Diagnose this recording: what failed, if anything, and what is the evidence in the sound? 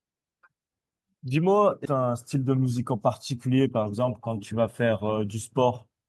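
The speech lurches forward at 1.85 to 1.87 s: one moment joins straight onto a later one with no pause or fill, and something like seven tenths of a second of talk never arrives. This is a skip ahead at the network and jitter-buffer stage. A block of audio was discarded, either lost in transit or dropped when the buffer overflowed, and playback resumed at later audio that was already queued.

Just after the jump, from 1.95 to 2.92 s and again from 3.33 to 4.20 s, the talker sounds slightly rushed, about 8 percent faster, yet the pitch stays put. This is jitter buffer speed-up in the receiver's playout stage. The buffer was holding more audio than its target, so it trimmed short pitch-period-sized slices over and over to catch up. That removed roughly a tenth of a second in the first stretch and somewhat less in the second.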